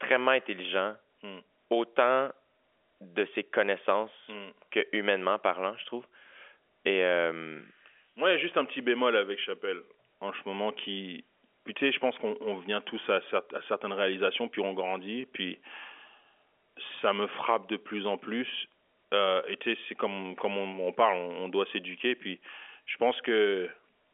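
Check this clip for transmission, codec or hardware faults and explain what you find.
No faults found; telephone-band speech, nothing above 3.7 kHz.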